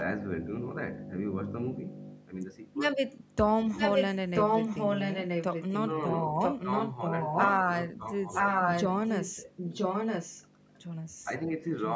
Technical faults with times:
3.74-4.06 echo leak
4.33-5.99 echo leak
6.39-7.58 echo leak
8.34-10.45 echo leak
10.75-10.79 echo leak
11.77-11.96 echo leak

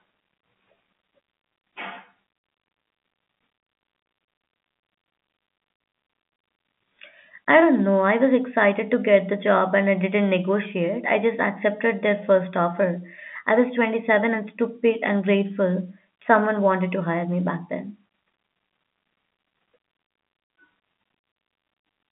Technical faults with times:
none

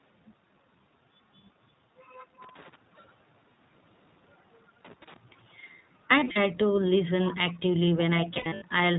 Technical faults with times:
0.00-8.99 iLBC codec
2.42-2.76 loose connector crackle
2.96-3.13 echo leak
6.20-6.38 lost iLBC frames
7.97-8.05 echo leak
8.34-8.63 lost iLBC frames

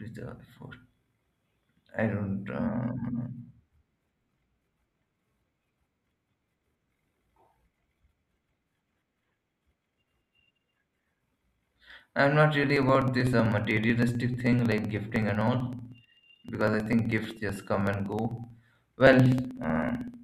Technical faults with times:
12.64-20.14 periodic USB or driver dropouts

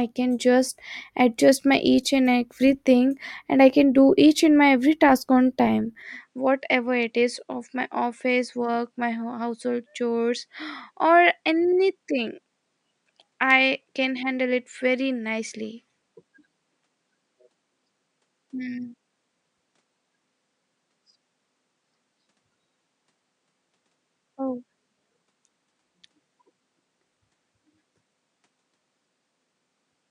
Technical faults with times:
6.02-30.10 input switched to a poorer device

